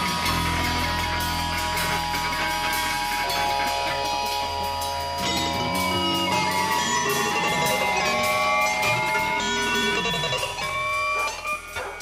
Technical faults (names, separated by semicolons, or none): none